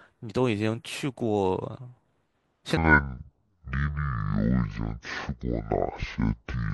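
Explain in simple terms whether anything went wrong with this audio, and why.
From 2.77 s to the end, the speech suddenly turns deep and dragging, nearly an octave lower, and runs at about 0.55 times its proper speed. This is a section at the wrong speed, likely from being played back against the wrong clock.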